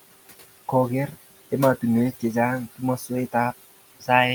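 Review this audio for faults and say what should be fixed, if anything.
Across the whole clip, the background pumps: it sinks in the gaps and swells back up under the speech. These are noise suppressor artifacts. The suppressor decides frame by frame which frequency bands hold steady noise and pulls them down by about 16 dB. The room noise it is working on, sitting about 17 dB below the speech, is part of the recording itself. Because the gain changes between frames and bands, what remains of that noise rises and falls with the speech instead of staying as a steady bed. Fix by easing the suppression depth and smoothing the gain over time, or by reducing room noise at the source so less suppression is needed.

From 2.98 to 3.10 s, the speech briefly goes faint and swallowed, as if that fragment had been pulled back into the background. This is speech cut by the noise suppressor. For roughly a tenth of a second it mistook low-level speech energy for noise and turned it down along with the background, by about 9 dB at the deepest point. 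Fix by raising the suppressor's speech-protection threshold or lowering its aggressiveness so quiet speech isn't classified as noise.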